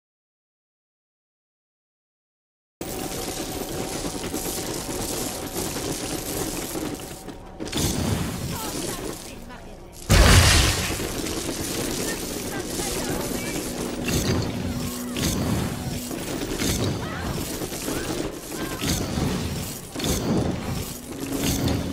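An audio dropout to silence runs from 0.00 to 2.81 s, already under way when the clip begins: the input was likely lost, so silence was written in its place. The opening is dead silence with no room tone before the sound arrives abruptly.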